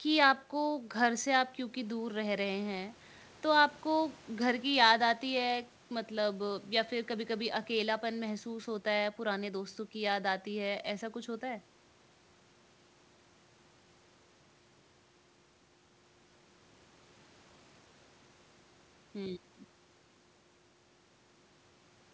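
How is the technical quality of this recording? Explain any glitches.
No glitches can be heard in the speech, which arrives intact over a wideband call path whose content stops at 8 kHz, consistent with G.722 coding.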